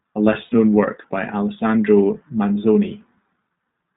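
Throughout, the speech carries iLBC codec coloring. The band is held to roughly 150 Hz to 3.7 kHz, and each frame's excitation is coded on its own, giving a rough, faintly synthetic edge that fits the 15.2 kbps mode. Unlike plain band-limiting, the damage is plainly audible texture.

From 0.44 to 0.54 s, lost iLBC frames leave a hole of about 80 ms, which fits four missing 20 ms frames. The decoder fills it by repeating the last pitch cycle blended with noise, so the gap sounds like a held, slightly buzzy vowel rather than silence or a click. Because iLBC frames stand alone, the speech snaps back cleanly right after, without the smeared recovery of codecs that depend on earlier frames.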